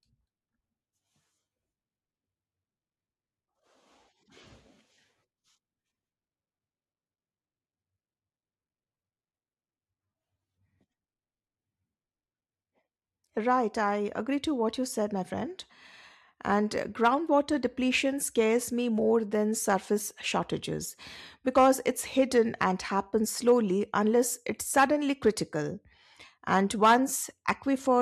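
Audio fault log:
No faults can be heard in the speech. There is nothing to log against any point in the recording.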